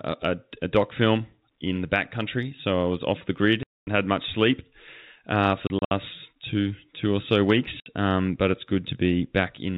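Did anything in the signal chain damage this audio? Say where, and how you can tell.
Yes, network packet loss filled with silence: hard-edged gaps at 3.63–3.87, 5.67–5.91 (scattered) and 7.80–7.86 s, sized in 30 ms steps. Concealment would have filled them.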